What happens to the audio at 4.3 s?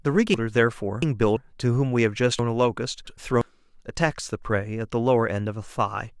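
Nothing goes wrong at 4.3 s; the speech carries on intact through that moment with no dropout, click, or distortion.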